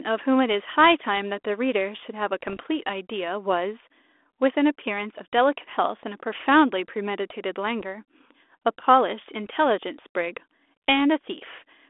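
Bit errors on an ADPCM link hit from 2.41 to 2.61 s, and again briefly at 7.80 s and 9.45 s. Flipped bits throw the decoder's step size and predictor off. Each hit rings on as a rough pop. The first is the longest burst.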